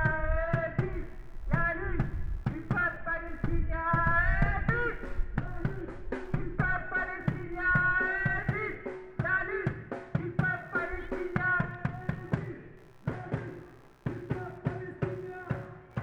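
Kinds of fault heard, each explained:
Computer activity noise: a faint buzzing chirp, pulsing roughly 70 times a second and sitting far below the sound, runs from about 0.92 s to the end. It comes from processor or graphics load shifting the ground the audio circuit shares with the computer.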